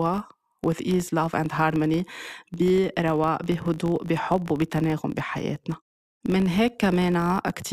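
From start to finish, the speech carries a buzz at 50 Hz. It comes from a filter restarted on every block. The filter drops its memory at each block boundary and begins again from silence. Each restart leaves a small transient. These arrive every 20 ms, which points to processing in 20 ms blocks. Together they fuse into a steady buzz. It grows louder as the speech gets louder and sinks back in quieter passages.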